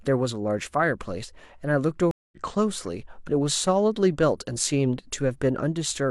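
A speech clip with a stream reconnect: at 2.11 s the audio drops out for about 208 ms, and when it comes back at 2.37 s it has skipped ahead roughly 150 ms, so a slice of speech is simply gone, as when a live stream's connection breaks and the decoder restarts mid-stream.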